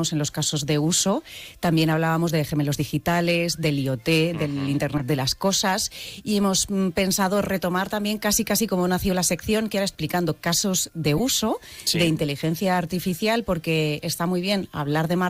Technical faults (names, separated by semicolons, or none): corrupt frame decoded